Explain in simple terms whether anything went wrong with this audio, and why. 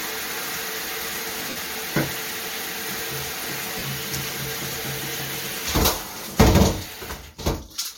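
Lost LE Audio frames cause brief glitches at 1.50 to 1.56 s, 3.78 to 3.83 s, and 6.95 s. Pieces of the Bluetooth stream went missing, and the receiver filled each gap by replaying the last sound with scrambled detail, so it briefly turns into a noisy smear.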